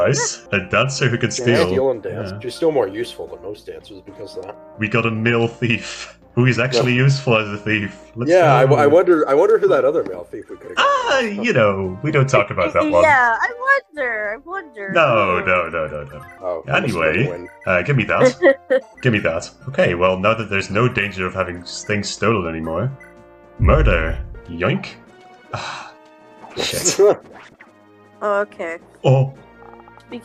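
No audible technical faults detected.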